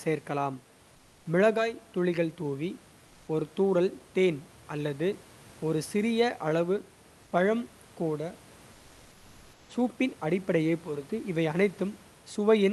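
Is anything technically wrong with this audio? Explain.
Yes, there are two short stretches of comfort noise in place of the background, at 0.95–1.25 s and at 7.23–7.31 s, the second between "ஒரு சிறிய அளவு" and "பழம் கூட". Discontinuous transmission likely paused the sender during these gaps, so the receiver synthesised a smooth, featureless hiss about 2 dB quieter than the real room noise.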